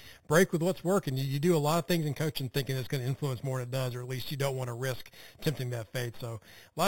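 A bright, metallic fizz rides on top of the speech from start to finish, rising and falling with its loudness. Its lowest band sits between 4 and 8 kHz, about 16 dB below the speech, and it moves against the pitch, dropping when the voice rises. This is imaging from sample-and-hold upsampling. Each sample was simply repeated to raise the rate, with no smoothing filter, so mirrored copies of the spectrum stayed audible. The 4 kHz edge fits an 8 kHz original rate.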